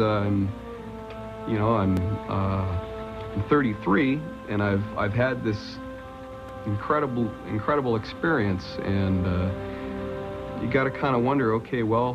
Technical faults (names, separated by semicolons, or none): repeated buffer